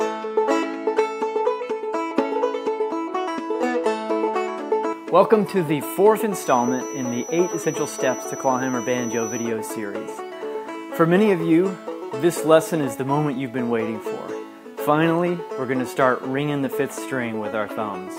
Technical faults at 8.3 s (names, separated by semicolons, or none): feedback whistle